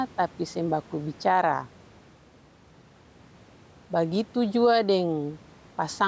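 Gain pumping runs through the whole recording. The likely cause is an input gain set far too high for the microphone, with a fast limiter or compressor clamping it down each time the speech turns loud. The level therefore breathes by roughly 5 dB. The faint room noise sits about 33 dB below the speech, and the speech sounds squashed, with little difference between loud and soft.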